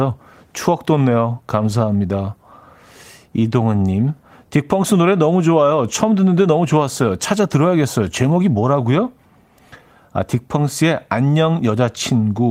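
The speech recording has no audible technical faults at any point.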